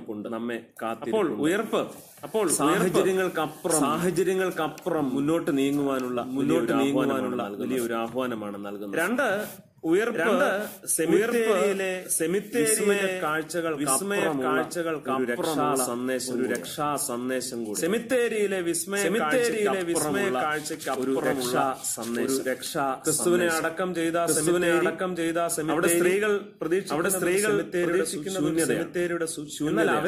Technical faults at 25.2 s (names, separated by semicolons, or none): doubled audio track